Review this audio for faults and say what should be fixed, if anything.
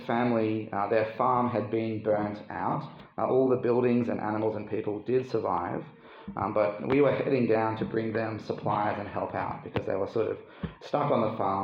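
No faults can be heard; nothing needs fixing.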